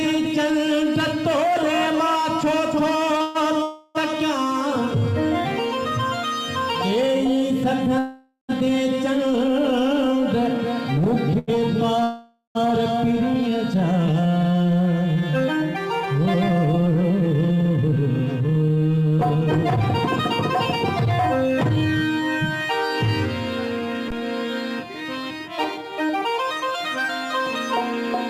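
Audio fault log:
3.17 to 3.22 s and 11.39 to 11.50 s, short stall from a late packet: a packet arrived after its playout time and the jitter buffer ran empty, so the receiver held the last sound for about 23 ms and then 88 ms before resuming at the same point. A sound is drawn out, with nothing lost.
3.22 to 3.37 s, 3.63 to 3.97 s, 7.99 to 8.51 s and 12.03 to 12.57 s, call audio freeze: playback stops while the last sound is carried on as a fading buzz, for 131 ms, 320 ms, 501 ms and 515 ms. The longer two end in about 110 ms and 100 ms of silence. Packets held up in transit likely emptied the jitter buffer. Each freeze inserts a gap and the sound then continues where it stopped.
4.95 to 5.91 s, jitter buffer slow-down: the receiver repeated single pitch periods and bits of pauses to rebuild its reserve, adding about 38 ms. The sound plays at 97% speed with unchanged pitch, drawn out slightly.
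16.49 to 18.77 s and 24.47 to 27.40 s, jitter buffer speed-up: with too much audio queued, the receiver cut short pitch-period pieces repeatedly, removing roughly 200 ms and then roughly 100 ms. The sound runs at 109% and then 104% speed at the same pitch, audibly hurried in the first stretch.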